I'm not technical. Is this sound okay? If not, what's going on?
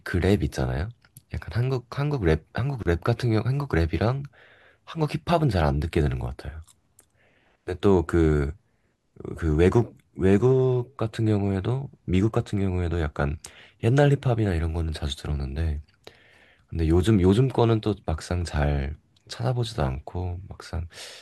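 No. At about 2.83 seconds the speech briefly stops, leaving a hole of roughly 30 milliseconds that ends at 2.86 seconds. This is a gap at a join of encoded pieces: the recording was compressed in separate chunks and stuck back together, and each chunk kept a sliver of padding silence at its edge. Unlike a dropout, where a bit of sound is lost, nothing is missing here; the speech picks up exactly where it left off.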